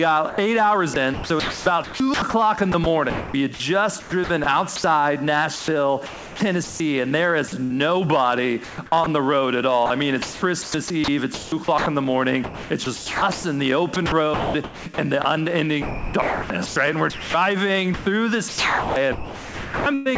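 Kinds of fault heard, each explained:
sound chopped by the voice detector: from 0.3 to 7.7 s and from 8.6 s to the end, about 2.2 s and 4.6 s of sound become flat comfort noise, likely from the sender's detector toggling. Unlike packet-loss dropouts, the gaps hold steady hiss, not silence or repeats.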